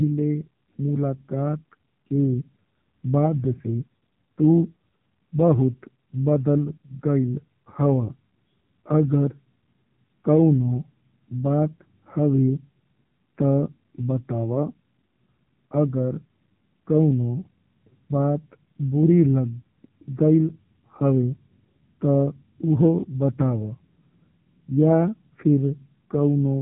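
Throughout, the speech has passed through the AMR narrowband mobile codec at a low rate, likely near 6.7 kbps. Its 8 kHz sampling cuts everything above 3.8 kHz, leaving a muffled, telephone-thin sound with heavy buzzy, synthetic roughness.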